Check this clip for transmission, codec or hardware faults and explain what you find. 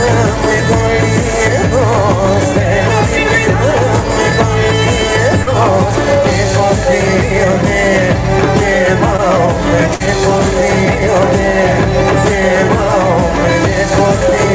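Three transmission faults are present, all from packet loss, on audio band-limited to 8 kHz, as expected from a G.722 call codec.

Burst of packet loss, 5.42 to 5.49 s and 9.94 to 10.02 s: consecutive packets were lost or arrived too late, so the receiver extended and faded the last sound, then skipped ahead, dropping about 40 ms and 60 ms respectively.

Short concealed packet loss, 9.17 to 9.20 s: about 20 ms never reached the decoder, so the receiver synthesised a continuation and blended back, heard as a brief smear.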